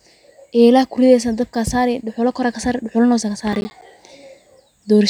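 At 3.53 s, just after "kasaari dhuxula na hosad", a burst of processor overload crackle runs until 3.82 s. For that stretch the processing could not keep pace, and several of the short audio blocks, on the order of 10 ms each, arrived too late. Each late block was replaced by silence, so the speech is broken into a rapid series of tiny dropouts with hard edges. The result is a gritty tearing crackle over the speech that stops once the load eases.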